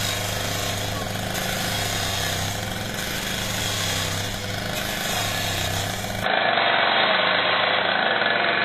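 From the start, the treble of these everyday sounds has a gritty, metallic sheen and stops near 14.9 kHz, likely from HE-AAC compression at a rate fitting about 24 kbps. The upper band is rebuilt from copied lower bands, so it sounds bright but misaligned rather than simply dull, which separates it from a plain low-pass.

At 6.24 s the sound abruptly turns boxy, with nothing above 4.1 kHz, a level change of roughly 5 dB, and a new noise floor about 35 dB down. It runs to the end without any gap. The sudden shift in tone, level and background noise points to the input likely switching to a poorer device, not a gradual equaliser change.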